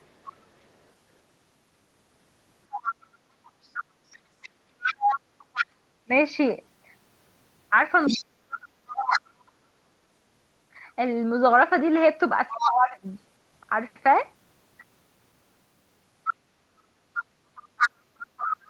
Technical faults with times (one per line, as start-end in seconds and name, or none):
0.25-9.19 other side's voice leaking through
4.19-9.46 speech suppressed in double talk
12.51-13.04 speech suppressed in double talk
12.60-12.71 other side's voice leaking through
16.24-18.57 other side's voice leaking through
16.33-18.70 speech suppressed in double talk